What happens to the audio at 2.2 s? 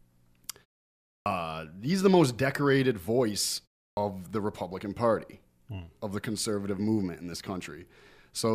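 At 2.2 s the speech runs on intact, with no dropout, distortion or other fault at that moment.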